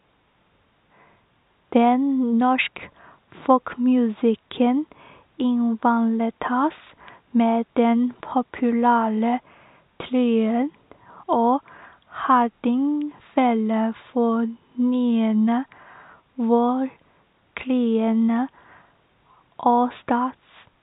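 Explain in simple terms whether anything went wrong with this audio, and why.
Nothing went wrong; the system handled this recording properly.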